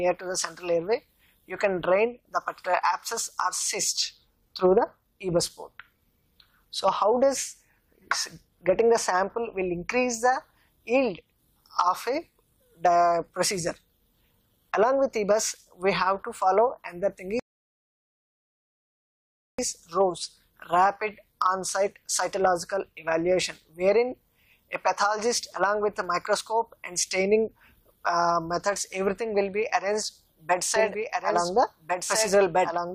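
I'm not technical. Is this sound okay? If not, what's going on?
No. A rebuffering stall runs from 17.40 to 19.59 s. The player ran out of downloaded sound, went silent for about 2.2 seconds while it waited for more, then carried on exactly where it stopped. Nothing is missing, but the pause is added.

A doubled audio track starts at 30.76 s and lasts to the end. A second copy of the same sound appears suddenly, trailing about one and a half seconds behind and a little quieter. It is likely being picked up twice through a slower route.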